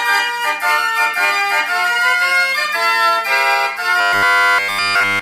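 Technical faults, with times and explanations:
4.01–5.22 s, robotic sound from repeated short buffers: the sound hardens into a rigid metallic buzz locked at 100 Hz, with almost none of the real audio coming through. The likely cause is a 10 ms stretch looped over and over while new audio arrives too slowly.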